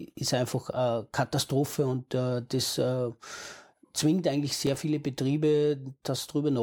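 Processor overload crackle appears from 4.67 to 4.75 s in this speech clip. For that stretch the processor falls behind and fails to deliver several short audio buffers on time. Each buffer is only a few milliseconds long, and each missed one drops out to silence with abrupt edges. About five of these dropouts arrive in quick succession, so the voice picks up a brief gritty tearing crackle that stops once the load eases.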